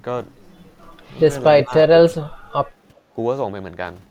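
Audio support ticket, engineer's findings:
Doubled audio track, 0.82–3.24 s: full-band copy trailing about 150 ms, roughly 5 dB down, no room colour, abrupt onset and cutoff. Likely a second capture path mixed in.

Speech suppressed in double talk, 1.62–2.55 s: talker dips in pieces, deepest roughly 25 dB, about half a second total. Likely the echo canceller ducking both sides during overlap.

Background gated by the echo canceller, 2.95–3.08 s: room tone drops about 8 dB for roughly 150 ms while the loudspeaker plays, then recovers on release.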